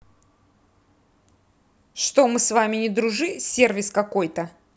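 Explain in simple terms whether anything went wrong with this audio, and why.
Nothing went wrong: the speech is intact throughout, with no dropouts, glitches or distortion to point to at any time.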